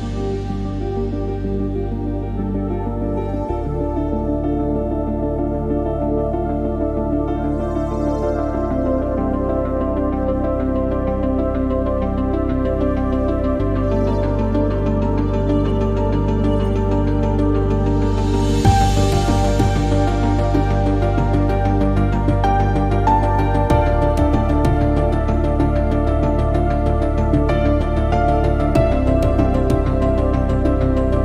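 No technical faults can be heard anywhere in the recording; the signal holds steady throughout.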